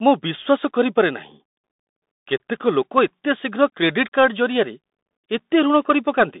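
Speech, and the whole thing has been through a Bluetooth CVSD headset codec. The band runs from roughly 200 Hz up to 3.7 kHz, so it has that boxed-in phone sound, with no air on top and thin lows. CVSD sends just one up-or-down bit per sample, which fits a 64 kbps stream, so the damage is plainly audible: scratchy s sounds, loud bright bits distorting as they outrun the step size, and a granular hiss sitting under everything.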